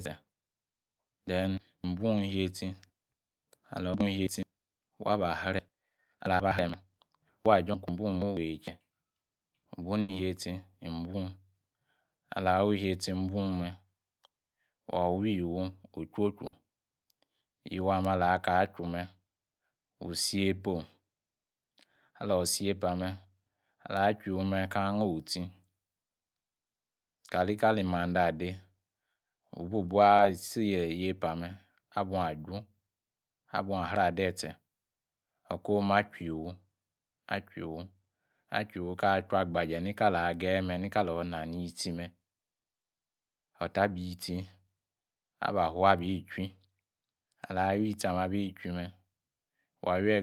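At 10.01 s, a burst of packet loss occurs. About 80 ms of audio never arrives. The receiver stretches the last sound across the gap and fades it down. Then the sound jumps ahead. A similar 60 ms burst follows at 16.47 s.

At 27.27 s, just before "kalikali mande", a short concealed packet loss fills about 20 ms. The decoder extends the preceding sound and blends back, leaving a brief smear. Another 20 ms concealment occurs at 30.17 s.

At 42.59 s, a third burst of packet loss removes 60 ms. The held, fading fill returns, and the sound resumes with that stretch missing.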